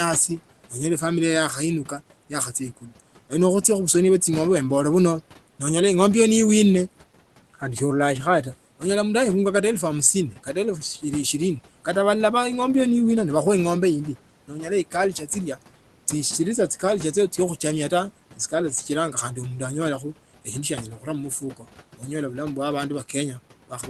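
At 2.77, 14.48, 15.13, 20.97 (just after "shia anyala") and 21.41 s, speech cut by the noise suppressor pulls brief stretches down about 8 to 11 dB. The speech fades with the background rather than breaking into silence, which is what separates it from a dropout.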